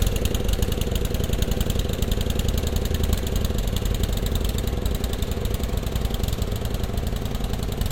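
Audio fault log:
0.52–7.79 s, clock drift buffer slips: two devices in the chain are likely running on separate clocks that disagree by roughly a tenth of a percent, so the buffer between them steadily drifts until a small block of about 70 samples is dropped or repeated. This happens about seven times, at a steady 1.45 s interval. Each slip breaks the waveform's continuity, which is heard as a regular click or pop over the sound.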